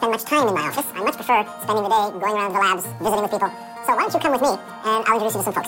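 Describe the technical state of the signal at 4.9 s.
At 4.9 s the audio is still read two samples at a time (double speed), as it is throughout the clip. Sample pairs are taken as single frames, so playback runs at 2x and sits 12 semitones higher.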